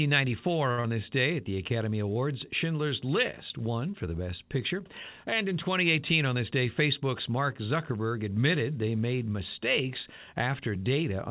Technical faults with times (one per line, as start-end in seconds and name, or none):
0.71-0.81 short stall from a late packet
0.81-0.87 short concealed packet loss
1.27-1.56 jitter buffer slow-down
6.35-7.32 jitter buffer speed-up